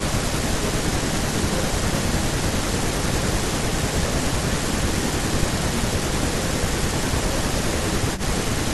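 No technical faults can be heard anywhere in this speech recording. There is no moment that needs a timestamp or an explanation.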